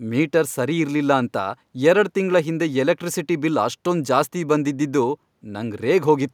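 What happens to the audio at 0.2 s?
Nothing goes wrong at 0.2 s; the speech plays through that moment intact.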